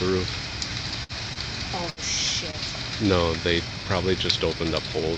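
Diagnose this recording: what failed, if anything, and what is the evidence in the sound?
The sound briefly hangs and stretches four times, at 1.03 to 1.12 s, 1.33 to 1.39 s, 1.90 to 2.00 s and 2.51 to 2.56 s, with a faint buzz or dip as each held segment gives way. These are short stalls from a late packet at the network stage. Each time a packet missed its slot, the jitter buffer ran dry and the receiver extended the last sound by 58, 24, 72 and 22 ms, then resumed where it left off.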